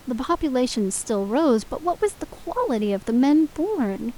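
No technical faults are audible in the speech; the only background is the room's own noise, sitting about 26 dB below the voice as part of the recording.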